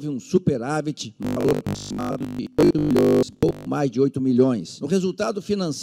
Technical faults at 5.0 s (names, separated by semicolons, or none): none